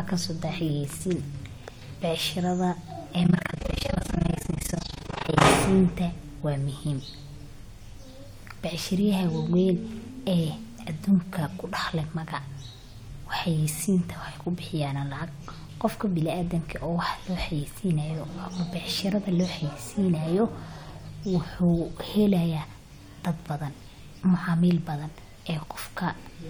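A speech recording with overlap-add ripple from 3.24 to 5.47 s. The level pumps around 30 times a second, dipping by about 60 dB. It sounds like a harsh, fast flutter. Windowed frames were rejoined with an overlap whose gains do not sum evenly.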